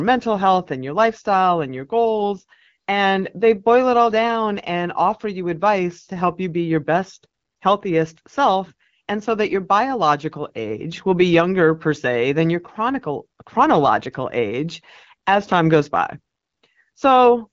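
No technical faults can be heard anywhere in the speech. It carries the light coloration of AMR wideband (HD Voice) coding at 12.65 kbit/s, with the top band above 6.4 kHz filled in as shaped noise.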